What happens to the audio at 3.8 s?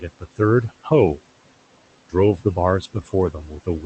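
Near the end, from 3.33 to 3.84 s, parts of the speech turn faint and swallowed, dipping by about 10 dB across roughly a tenth of a second in total. This is speech cut by the noise suppressor, which mistook those quieter speech sounds for background and turned them down with it. Around the same point the background sinks between the words and rises under them. These are noise suppressor artifacts, as the suppressor pulls the steady noise down by about 17 dB, band by band and frame by frame.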